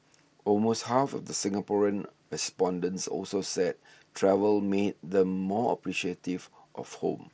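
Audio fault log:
No faults heard anywhere in this speech recording.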